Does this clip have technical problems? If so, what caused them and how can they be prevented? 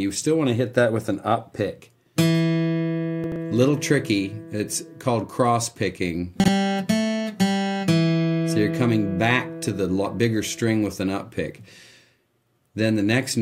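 Yes. Chunks play out of order twice: from 3.24 to 3.36 s and from 6.40 to 6.48 s. In each window a short block of audio, consistent with a 40 ms chunk, plays later than it should, after material that belongs behind it. This fits a delay of two chunks in the first case and one in the second. Nothing is missing, but the sequence is scrambled, leaving three hard joins per event. Reordering chunks by sequence number in a jitter buffer before playback prevents this.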